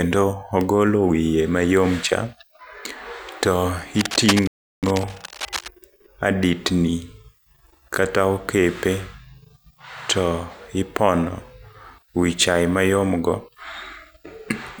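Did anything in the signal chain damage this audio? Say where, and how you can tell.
Yes. Cable scratch noise runs from 3.95 to 5.72 s. Dense, uneven rustling sits roughly 10 dB under the speech. A worn analogue cable or connector was likely moved.

A rebuffering stall occurs at playback, 4.47 to 4.83 s. The player ran dry. Sound drops to silence, then resumes exactly where it stopped, adding 0.35 s.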